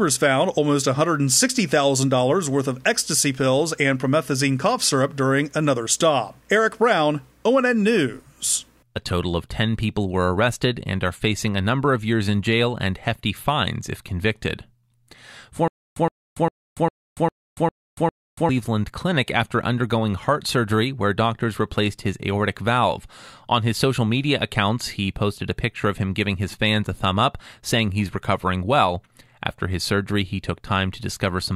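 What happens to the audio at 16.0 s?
The playback most likely stalled and retried, replaying its last buffered fragment each time before running dry, a stutter with silent gaps that runs from 15.68 s to 18.49 s. The speech freezes into a clipped burst about 119 ms long that repeats seven times, each followed by about 283 ms of dead digital silence, giving a steady beat every 402 ms. Whatever should have been heard across that span never arrives.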